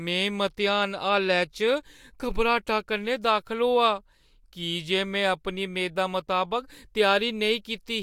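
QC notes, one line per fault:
Nothing stood out on listening to this speech clip.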